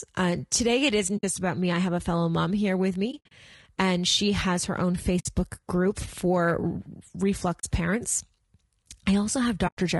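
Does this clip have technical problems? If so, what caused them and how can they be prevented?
Yes, two problems. Throughout the speech there's a rough, grainy texture, with noise filling the gaps between the pitch harmonics and a top band that sounds thin and somewhat synthetic. That's most likely low-delay AAC compression (AAC-ELD) run at a low bitrate, which fits something around 32 kbps. Its short frames can't separate the harmonics cleanly, so at that rate the damage is plainly audible. Giving the encoder a higher bitrate, well above that range, should prevent it.

There's also AAC frame loss with muting: soft-edged dropouts where the sound fades out and back in. They fall at 1.17 to 1.24 s (about 60 ms), 3.11 to 3.32 s (about 120 ms lost, scattered over 200 ms, with the longest gap around 70 ms), 5.19 to 5.26 s (60 ms), 7.59 to 7.64 s (40 ms) and 9.67 to 9.78 s (100 ms). The lengths fit whole frames of about 20 ms each being dropped and zeroed by the decoder, with the overlapping windows smoothing the edges. 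Adding forward error correction or packet-loss concealment on the transport would prevent these holes.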